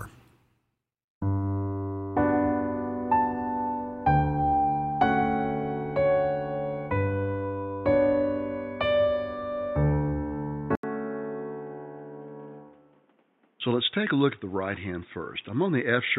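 At 10.75 s the sound drops out for 80 ms. It returns dull and boxy, with nothing above 3.8 kHz. It is roughly 10 dB quieter, over faint new background noise about 35 dB below the signal. The input was likely switched to a poorer device. This continues to the end.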